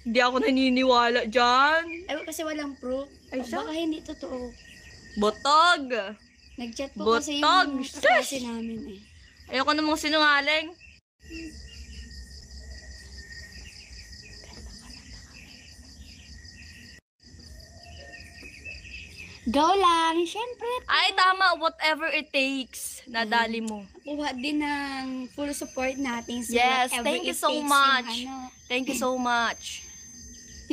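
From 25.46 s to the end of the clip at 30.72 s, a feedback whistle sits behind the sound: a thin, steady tone at 6.3 kHz, roughly 25 dB below the programme level, swelling and fading slowly in loudness. The likely cause is a loudspeaker-to-microphone loop running just at the edge of instability, where gain at that one frequency is high enough to sustain a ringing tone but not enough to build into a runaway howl.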